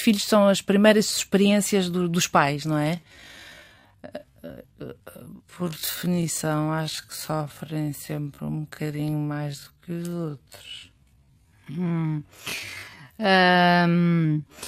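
Software most likely stretched the audio from 2.94 s to the end of the clip to fill a longer slot, running it at about 0.53 times its original speed while holding the pitch steady by repeating short fragments. Right after "do dos pais não", this time-stretched section makes the speech drag at roughly half pace without dropping in pitch.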